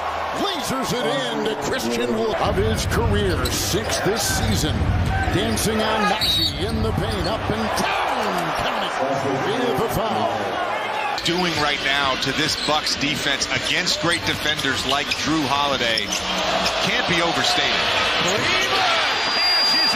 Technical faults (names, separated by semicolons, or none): loudspeaker feedback squeal